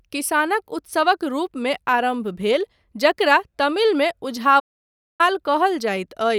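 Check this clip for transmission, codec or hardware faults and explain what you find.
One fault stands out, a playback stall in this speech clip. From 4.59 to 5.21 s, just after "जकरा तमिलमे", the sound cuts off mid-flow and stays silent for about 0.6 s before resuming. The likely cause is the player starving for data or its output thread being blocked, so nothing reached the output until it caught up. On a waveform this appears as a flat line with abrupt edges; on a spectrogram, a clean vertical gap across all frequencies.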